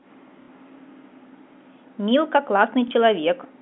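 Packet loss with last packet repeated, at 0.42–0.48 s and 2.88–2.91 s in this telephone-band speech, makes a brief stutter and then a small blip as the receiver replays stale audio, consistent with 30 ms packets.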